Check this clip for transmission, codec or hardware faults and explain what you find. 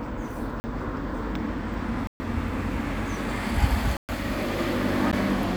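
Four blocks of digital silence cut into the sound: at 0.60–0.64 s (40 ms), 2.07–2.20 s (about 129 ms), 3.97–4.09 s (120 ms), and a 14 ms one at 5.11 s. Each time the output buffer was likely not filled in time, so the sound dropped straight to silence and returned without any fade. The abrupt cuts give a tick at 5.11 s and audible holes at the longer blocks.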